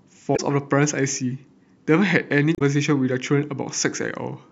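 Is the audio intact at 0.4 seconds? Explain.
No, not quite. There's damaged data in the compressed stream from about 0.33 to 0.40 s, so 0.4 s sits right at the tail of the fault, just as the audio recovers. Some of the coded data there was lost or overwritten, so the decoder misreads those frames, loses sync and hunts for the next valid frame header. You hear it as a short, roughly 70 ms burst of garbled chirp or blip in the speech.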